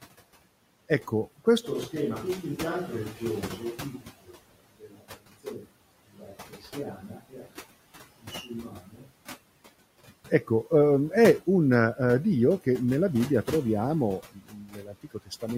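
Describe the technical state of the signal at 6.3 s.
Between 6.16 and 6.76 s the speech sounds swallowed and faint. This is speech cut by the noise suppressor, which mistook parts of it for noise and dropped them by up to about 11 dB over roughly 0.4 s.

Underneath, the whole stretch from 1.65 to 10.15 s, starting at "ecco ehm è", sounds hollow and roomy, about 10 dB quieter and thin in the bass. A switch to a distant microphone is the likely cause.

Throughout the clip the background sinks between phrases and rises under them. These are noise suppressor artifacts, from frame-by-frame band gating that cuts the noise by about 17 dB.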